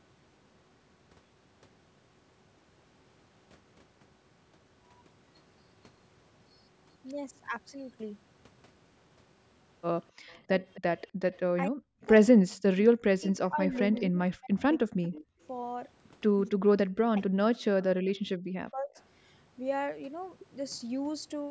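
A speech recording with two faults that point to the echo canceller on a loudspeaker call, likely struggling whenever both sides talked at once. The first is speech suppressed in double talk: unable to tell the local talker from the returning loudspeaker sound, the canceller turned everything down. The voice dips by about 10 dB for a fraction of its length, at 10.28–10.62 s, then drops far deeper, by about 40 dB, at 11.68–12.06 s, 12.91–15.38 s and 16.57–18.96 s. The second is echo leak: some of the far side's audio picked up by the microphone slipped past the canceller and came back. A faint delayed copy of the voice, trailing by roughly 260 ms and sitting about 25 to 35 dB below the speech, is heard at 10.28–11.37 s, 13.74–14.01 s and briefly at 18.95–19.02 s. The call's microphone processing leaves nothing above 8 kHz, and its removal of the lowest bass is normal.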